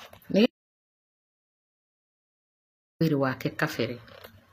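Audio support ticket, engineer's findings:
Treble on the speech is gritty and lispy throughout. S sounds turn metallic. Nothing above 15.4 kHz. Likely HE-AAC compression, v2 variant, at a rate that fits roughly 24 kbps. Codec damage plainly audible. Mechanism: only the lower band is coded. Treble is rebuilt by spectral band replication, copying lower bands upward under a coarse envelope. Harmonics fail to line up across the crossover.

Audio dropout to silence from 0.46 s to 3.01 s. About 2.54 s lost. Gap is silent, no room tone. Speech cuts off mid-flow and resumes mid-flow. Content in the gap unrecoverable. Probable component: input device or link. Likely cause is a disconnect, link failure or stray mute. The recorder kept writing silence while input was absent.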